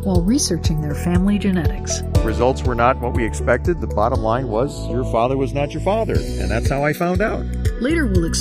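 Throughout the sound the two channels are drifting apart: they seem to run on separate clocks about 100 ppm apart, so the inter-channel delay creeps to under a millisecond by the end. Summed to mono, comb notches glide slowly in one direction, unlike a fixed offset's static colouration.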